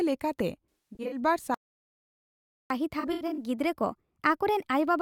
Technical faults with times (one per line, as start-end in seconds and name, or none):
0.76-1.19 AAC frame loss with concealment
1.54-2.70 playback stall
2.70-5.01 catch-up at higher speed
2.99-3.43 AAC frame loss with concealment